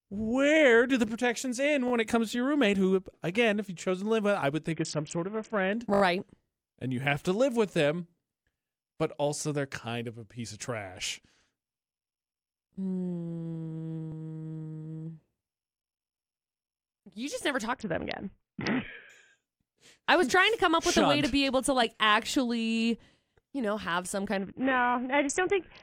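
Between "do the protections end" and "when it comes to", at 1.88 to 1.92 s, a repeated buffer sounds as a brief buzzy stutter: one 20 ms piece plays twice more with hard joins, and nothing is lost.

After "live with I would", from 4.72 to 5.73 s, a Bluetooth SBC bit pool drop dulls the treble and adds gritty noise. The sound fits the bit pool falling from 31 to about 5, near 50 kbps. Unlike the stutters, the timing stays intact.

At 5.94 to 6.02 s a 20 ms buffer repeats four extra times, and at 14.12 s once more, each time as a short click-like buzz.

The dull, gritty degradation returns after "just never", from 17.73 to 19.10 s, and again from 24.36 s to the end.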